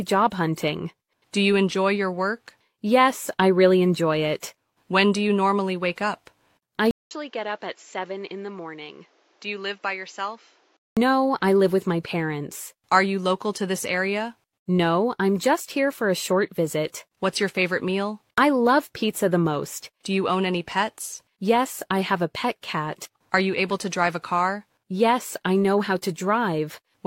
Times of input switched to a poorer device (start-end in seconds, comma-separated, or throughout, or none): 6.91-10.97